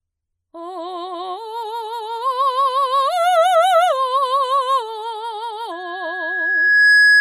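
From 5.71 s to the end, a microphone is picking up the loudspeaker it drives, and the loop's gain around 1.7 kHz has climbed past unity, producing loudspeaker feedback squeal. Each trip through the speaker and back reinforces that one frequency, so a pure tone rises out of the music, swelling over roughly a second into a piercing whistle that ends up around 10 dB louder than the music and is still sounding when the clip stops.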